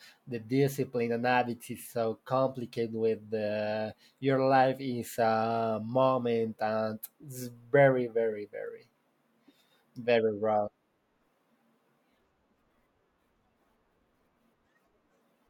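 Nothing in this speech recording stands out as a technical fault, so there's no problem to point to at any moment.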